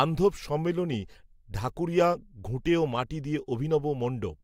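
No technical faults are audible anywhere in the recording.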